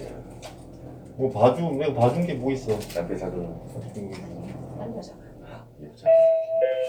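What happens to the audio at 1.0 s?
Nothing goes wrong at 1.0 s; the sound plays through that moment intact, with no dropout, click, distortion or other fault.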